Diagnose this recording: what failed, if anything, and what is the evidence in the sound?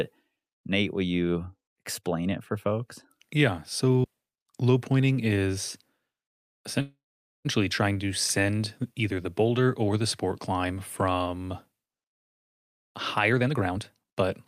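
Playback stage, optical disc. At 4.04 s the speech ticks and drops out for a very brief mute, well under 20 ms. It then resumes from a different point rather than where it left off. That is a CD skip. A knock or a disc flaw threw the laser onto a neighbouring turn of the spiral. The player muted the moment of lost tracking and carried on from the new position, so the speech jumps.

Network stage, on a call. From 6.81 to 7.47 s the speech stops and the last sound is carried on as a fading buzz. It decays into silence for roughly half a second. The speech then picks up exactly where it stopped, with nothing lost. The whole hold adds about 0.63 s of delay. This is a call audio freeze. The likely cause is packets stalling in transit, so the jitter buffer ran dry and the receiver filled the gap.

Call processing, at the jitter buffer. From 12.16 to 14.23 s the speech runs fast, at about 126% of normal rate. 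Its pitch stays unchanged, so it sounds hurried rather than squeaky. About half a second of audio is trimmed away across that stretch. This is a jitter buffer speed-up. The buffer held more audio than its target, so the receiver cut many short pitch-period slices to pull the delay back down.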